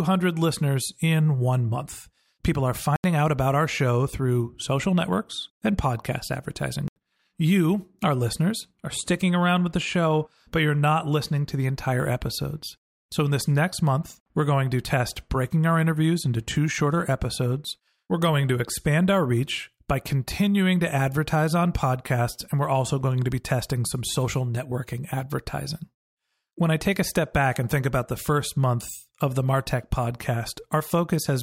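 At 2.96 s, just before "out about our show", and again at 6.88 s, after "social networks and podcast", the speech drops into an 80 ms block of digital silence. The sound cuts out and back with no fade, leaving a short hole each time.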